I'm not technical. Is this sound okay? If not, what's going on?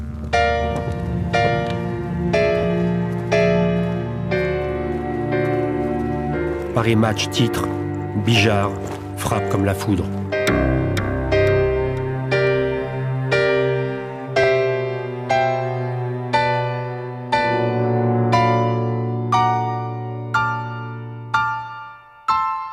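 No. There are two places, at about 2.63 seconds and again at about 14.44 seconds, where the sound jumps forward very slightly. The likely cause is a dropped buffer (overrun): the recording program fell behind, and a tiny slice, only a few thousandths of a second, was overwritten before it could be saved. Unlike a dropout, there's no silent gap. The two sides simply butt together.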